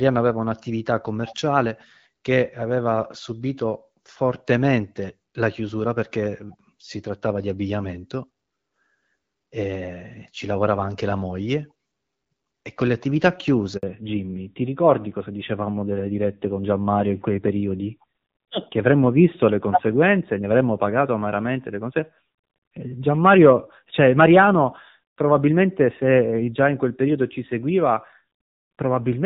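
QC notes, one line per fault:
13.77–13.83 s, handover gap: Right after "con le attività" the speech cuts off abruptly, fading within a few tens of milliseconds, and stays silent for about 60 ms before sound returns. The call was passed from one network to another, and no speech frames reached the receiver while the link switched over. Whatever was said in that short window is simply missing. It is not smeared, muffled or repeated.
13.83 s to end, fallback to narrowband: From the moment sound resumes after "con le attività", the speech turns duller, boxier and rougher, with nothing left above 4 kHz. Before the gap the call ran as HD Voice, with clear and only lightly coded wideband speech. After the handover it sits on an older narrowband codec, which fits AMR-NB at around 7.4 kbit/s. Losing the upper band strips out sibilance and air, and the lower rate adds the grit.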